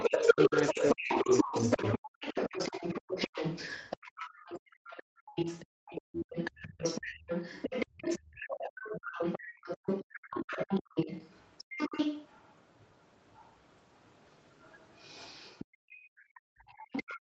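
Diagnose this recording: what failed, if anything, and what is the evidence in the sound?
The failures are all in the call's echo control, and they show up in three ways.

Other side's voice leaking through runs the whole clip: a second voice sits under the talker, only about 5 dB down. The far end is playing on a loudspeaker and getting back into the mic, and the echo canceller is likely not converging on that path, so a good chunk of the echo survives into the send signal.

Speech suppressed in double talk hits from 0.33 to 2.02 s, where the talker is turned down in stretches totalling about half a second and dips by something like 40 dB at worst. Shorter bites follow at 9.47 s (roughly 30 dB, under a tenth of a second) and 11.73 s (around 20 dB, a few tens of ms). Both sides are talking there, and the likely cause is the canceller mistaking the local talker for echo and clamping everything.

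Background gated by the echo canceller shows as the room tone dropping out and snapping back: 5.03 to 5.85 s, down about 40 dB for around a third of a second; 7.86 to 8.31 s, about 22 dB; 10.83 to 10.95 s, about 26 dB; and 15.65 to 16.59 s, about 40 dB for most of a second. That's the suppressor slamming the mic down while the loudspeaker is active, then releasing. The Opus leg at 20 kbps, with its 8 kHz top end, is just the call path carrying all this.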